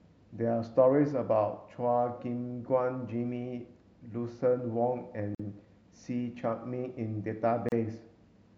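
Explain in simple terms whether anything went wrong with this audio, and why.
Two short silences appear where separately encoded pieces of the recording were stuck together without trimming. Each encoding run adds a little silence at its start and pads its final stretch, and that padding was left in. The result is a gap at a join of encoded pieces: the speech drops out at 5.35 s for about 47 milliseconds and again at 7.69 s for about 34 milliseconds, with blurred edges, then resumes exactly where it stopped.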